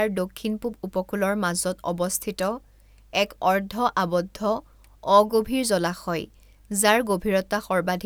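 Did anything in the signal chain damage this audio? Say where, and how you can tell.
No, nothing in the signal chain audibly damaged this speech recording, and every stage it passed through left the signal intact.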